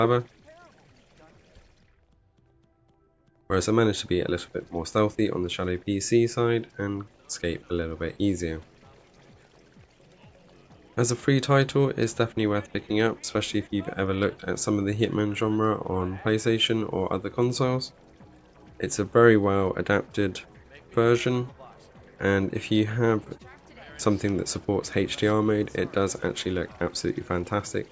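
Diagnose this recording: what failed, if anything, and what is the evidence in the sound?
Nothing in the recording points to a failure at any stage of the chain. There is no event in the sound that calls for a diagnosis.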